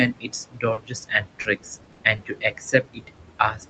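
Noise suppressor artifacts run through this speech clip. The suppressor keeps pulling down whatever frequency bands it judges to be steady noise, frame by frame, so the room noise, which sits only about 11 dB below the speech, dips between phrases and swells under them. Speech cut by the noise suppressor affects the whole span from 0.12 s to the end. The suppressor treats parts of the speech as noise and turns them down with the background, by about 22 dB at the deepest, so soft consonants and word endings sound swallowed or faint. Short concealed packet loss occurs at 0.73–0.79 s, 1.41–1.47 s, 1.83–1.90 s, 2.16–2.20 s and 3.16–3.20 s. In each case 20 to 40 ms of audio arrived too late, and the receiver extended the preceding sound before blending back, which leaves a brief smear or wobble. A burst of packet loss at 1.92–2.00 s covers about 60 ms with a held, fading continuation of the last sound, and the audio picks up further on with that stretch missing. 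Nothing in the signal extends above 8 kHz, which fits a wideband call codec.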